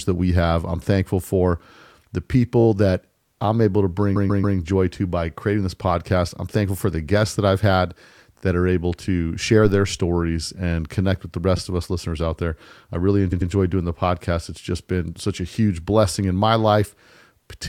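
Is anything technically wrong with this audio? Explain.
Yes, two faults are audible in this speech clip.

Repeated frames at 2.60–2.66 s, 4.15–4.57 s (after "that I'm able to"), 8.37–8.43 s (after "guests that I've had"), 11.57 s and 13.31–13.50 s: short blocks of compressed audio, from 5.8 ms to 139.3 ms, replay two or three extra times, producing stutters and lengthening the audio.

Periodic USB or driver dropouts from 13.83 to 17.33 s: every 0.5 s, something blocks the audio path and a tiny sliver of sound is skipped. The result is about seven evenly spaced ticks, heard only while speech is present.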